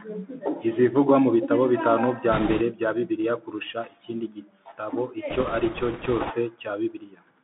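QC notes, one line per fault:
throughout: Bluetooth CVSD headset codec. The sound is confined to a narrow telephone band of roughly 150 Hz to 3.6 kHz, with nothing above. Each sample is coded as a single up-or-down step whose size adapts, so loud high-frequency passages outrun the step and distort, sibilants turn scratchy, and a fine granular hiss sits under the speech. On a spectrogram, energy stops sharply at 3.6 kHz; the waveform shows slope-limited, staircase-like edges on fast transients.
2.32–2.62 s and 5.30–6.32 s: bit errors on a Bluetooth voice link. Flipped bits in the one-bit stream push the reconstruction briefly off course. Each bit carries little weight and the error decays, so instead of loud clicks there is a rushing, crackly noise over the speech. It is heavier in the short first burst, where the error rate is around 10 percent, and lighter across the second, at around 4 percent. 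A spectrogram shows broadband speckled noise filling the band in both spans, with no isolated spikes in the waveform.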